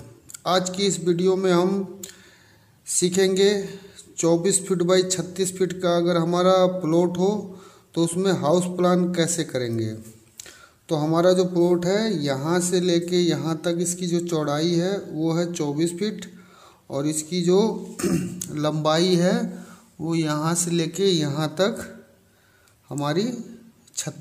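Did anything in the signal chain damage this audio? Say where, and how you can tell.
No, nothing in the signal chain stood out as a problem on listening.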